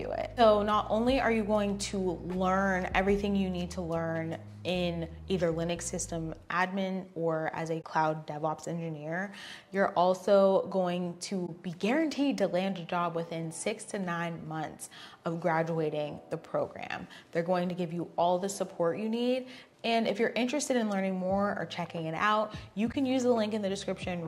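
Three brief dropouts occur, at 7.81 to 7.84 s, 11.46 to 11.49 s, and 22.92 to 22.95 s. Each is AAC frame loss with muting. The decoder received nothing for that stretch, so it filled the gap with silence. The overlapping transform windows blend the sound out and back in. Each dropout is a short, soft-edged gap in the sound. Its length, about 21 ms at the core, fits one lost frame.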